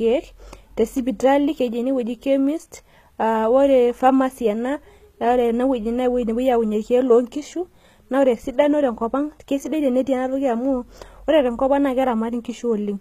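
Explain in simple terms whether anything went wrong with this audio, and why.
HE-AAC compression damage runs through the whole speech clip, from start to finish. The treble sounds artificial, and the s sounds come out gritty and lispy. This is likely from HE-AAC, a codec that saves space by storing only the lower part of the sound properly and faking the highs by copying lower bands upward. Those copied highs don't match the real ones, and above about 14.8 kHz there's nothing at all.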